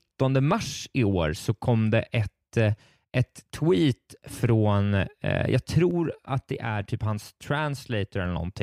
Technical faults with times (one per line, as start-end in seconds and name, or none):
5.91-8.25 sudden gain jump